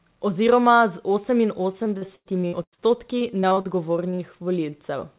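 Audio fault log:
1.72–2.81 s, repeated packet loss (robotic sound): the speech turns choppy and robotic, with a string of dropouts up to about 0.1 s long. About a third of this stretch is patched rather than real. Each gap is filled by stretching the last received sound, and the next gap arrives before the audio settles, so the repeated fills give a buzzy, robotic texture.
3.19–3.67 s, repeated packet loss (robotic sound): the same choppy, mechanical quality returns more briefly, with shorter holes of up to about 40 ms. Again roughly a third of the span is concealment, so the voice flutters between real and synthesised fragments.
4.11–4.21 s, short concealed packet loss: a quick smear or wobble, made of two back-to-back holes of 20 ms and then 40 ms. The receiver bridged each one by continuing the preceding sound and then blended back into the real signal, so the speech blurs for a moment instead of breaking off cleanly. 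The audio has no content above 4 kHz throughout, which fits a G.711 call path at 64 kbps.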